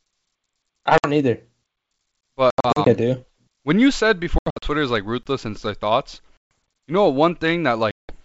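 Packet loss on an ADPCM call first strikes at 0.98 to 1.10 s, where about 60 ms drops out as a few packets. The holes have hard edges, and because the decoder's adaptive predictor and step size lose track of the sender's, the speech comes back slightly distorted and settles within tens of milliseconds.

A gap between chunks follows at 2.21 to 2.23 s, a 25 ms stretch of silence at the join between 3 s blocks. Nothing is missing, but the flow is cut by a clean, sudden hole.

Packet loss returns at 2.50 to 2.88 s, with about 180 ms lost in scattered bursts across 360 ms, the longest run 80 ms. The result is a broken, stuttering stretch.

It hits again at 4.38 to 4.69 s, between "you said" and "is like", losing 180 ms across 240 ms in the same ragged way.

The second gap between chunks falls at 5.23 to 5.26 s, between "is like" and "in their thoughts". It is another 25 ms hole, arriving 3 s after the first.

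Packet loss recurs at 6.37 to 6.51 s, between "in their thoughts" and "you know". This time it is a solid 140 ms hole followed by the same brief mistracking distortion.

It recurs once more at 7.91 to 8.21 s, with about 180 ms lost close to the end of the clip.

Underneath all of this, the G.722 wideband coding at 64 kbit/s carries the speech clearly up to about 7 kHz, with a light hiss in the upper band.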